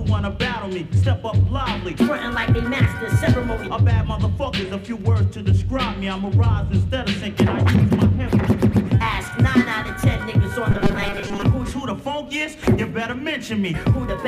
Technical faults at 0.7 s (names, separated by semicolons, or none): none